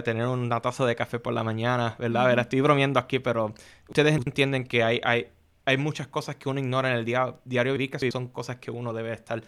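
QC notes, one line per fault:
3.93–4.27 s and 7.77–8.11 s, chunks out of order: in each span, a roughly 85 ms block plays three blocks late. Nothing is missing, unlike a dropout, but the sound jumps around, with three hard joins.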